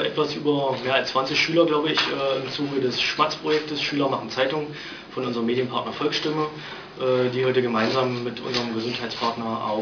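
Aliasing runs through the whole clip. The sound was downsampled without filtering first. Content above 5.5 kHz folds back as false, unrelated tones, about 15 dB under the signal. The band ends hard at 5.5 kHz, fitting an 11 kHz rate. Highs sound gritty and metallic.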